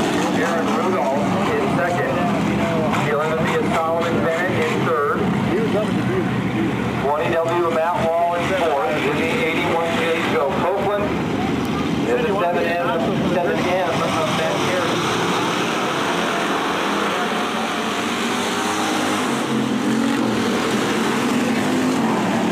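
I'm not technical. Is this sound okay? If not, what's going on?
No. All the way through there is a faint hiss or grainy roughness that gets stronger when the sound is loud or bright and disappears in the quiet gaps. That is sample clock jitter. The timing clock inside the equipment that turns sound into digital numbers is unsteady, so each measurement lands a few millionths of a second early or late. Fast-changing parts of the sound are thrown off the most, and that error comes out as roughness.

There are also two sharp ticks, one at 10.83 seconds and another at 11.65 seconds. Each is a bit error spike. One digit in the stored numbers got flipped, so for an instant the recording jumps to a wrong value and immediately snaps back. The result is a brief click with no connection to the actual sound.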